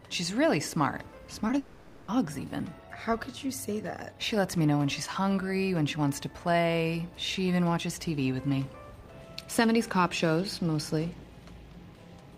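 At 1.47 to 1.50 s and again at 1.52 to 1.54 s, short concealed packet loss leaves two brief smears. About 20 ms and then 10 ms of audio failed to reach the decoder in time. The receiver extended the preceding sound across each gap and blended back into the real signal.

From 1.58 to 2.09 s the sound turns into a continued, fading extension of what came just before and never reaches silence. The audio then resumes with roughly half a second missing, most likely a long network dropout that the receiver masked with synthesized fill.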